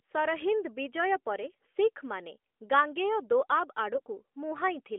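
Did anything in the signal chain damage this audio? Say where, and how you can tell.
Yes, at the network stage: AMR bit errors from 3.94 to 4.02 s, about four frames, turn the speech scratchy. The spectrogram smears the formants while the waveform level holds, because flipped bits misplace the excitation pulses.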